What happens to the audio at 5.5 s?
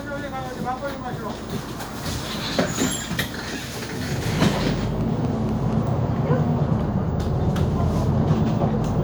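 At 5.5 s a train of clicks runs from 4.28 to 5.74 s: about seven identical ticks, evenly spaced at 4.1 per second, poking a few dB above the sound, likely from interference. Their regular spacing separates them from random crackle.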